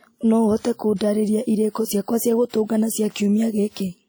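A ringing, washy quality with a hiss that rises and falls alongside the speech runs through the whole recording. That is most likely WMA compression: a transform codec at a low rate, consistent with about 48 kbps, smearing quantisation noise across long blocks and clearly damaging the sound.

At 0.59, 0.74, 1.70, 2.02, 2.65 and 3.12 s, sharp attacks arrive softened, each led by a brief hiss lasting 40 to 56 ms. This is pre-echo: noise scaled for the loud onset spreads back through its block into the quiet moment just before it.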